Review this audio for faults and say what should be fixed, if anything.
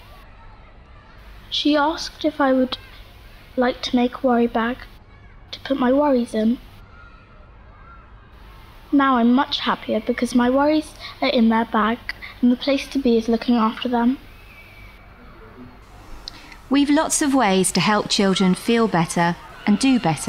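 Nothing in the recording needs fixing. No faults turn up anywhere in the audio, so there is nothing to correct or prevent.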